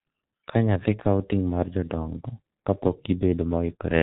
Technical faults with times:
0.00-4.02 G.723.1 codec

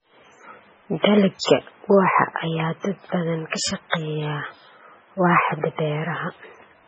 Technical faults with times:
0.00-6.88 MP3 compression
1.39-1.43 pre-echo

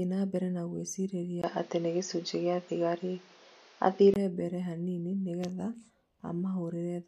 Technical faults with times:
1.42-4.16 input switched to a poorer device

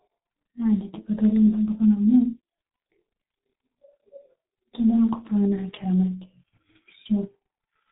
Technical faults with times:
0.00-7.92 G.723.1 codec

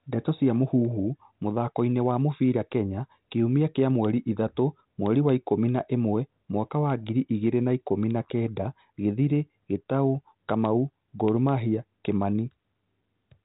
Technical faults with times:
none

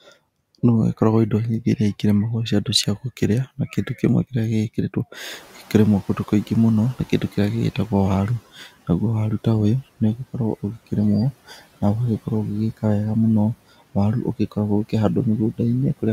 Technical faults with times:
5.32-8.42 noise suppressor catching up
11.47-11.62 speech cut by the noise suppressor

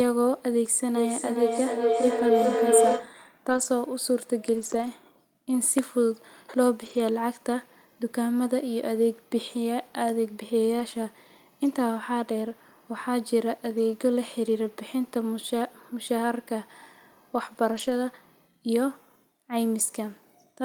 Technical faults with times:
0.96-3.25 feedback howl
2.19-2.21 lost packet rebuilt from error correction
3.49-3.63 lost packet rebuilt from error correction
4.53-4.87 lost packet rebuilt from error correction
6.81-6.99 lost packet rebuilt from error correction
10.79 lost packet rebuilt from error correction
17.73-17.91 lost packet rebuilt from error correction

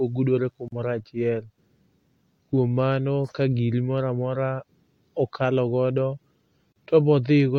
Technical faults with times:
0.68-0.72 gap at a join of encoded pieces
6.72-6.76 gap at a join of encoded pieces

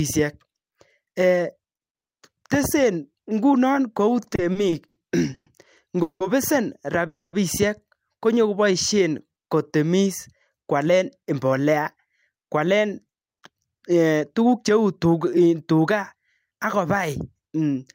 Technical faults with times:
4.23-4.98 repeated stalls (stutter)
5.34-5.48 call audio freeze
6.02-6.22 call audio freeze
7.07-7.35 call audio freeze
8.47-9.69 jitter buffer slow-down
11.30-16.47 jitter buffer speed-up

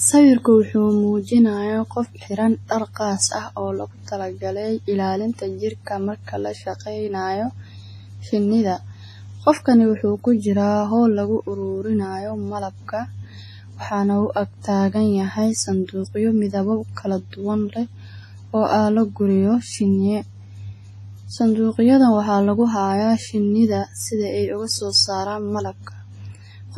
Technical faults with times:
0.00-26.77 WMA compression

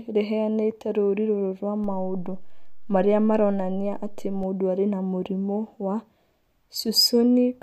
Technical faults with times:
1.84-4.43 DC step

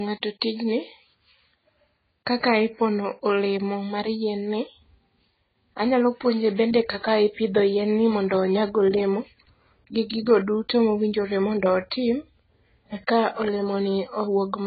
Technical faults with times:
0.00-14.67 transcoding between lossy codecs

